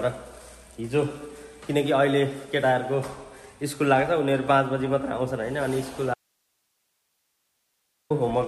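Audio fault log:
6.14–8.10 s, audio dropout to a faint residue: sound cuts abruptly for about 1.96 s, leaving only hiss roughly 50 dB down, likely a signal break with the downstream path still live.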